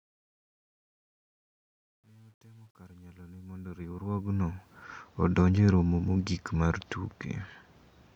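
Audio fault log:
0.00–4.84 s, truncation distortion on a fade: the speech rises out of a gritty haze, worst from 0.00 to 3.61 s, where the level is lowest. The gain stage rounds each sample to a coarse grid with no dither, which fits roughly 10-bit word length. Near the bottom, the waveform collapses into a few square steps, so the quiet start sounds gritty until the level clears them.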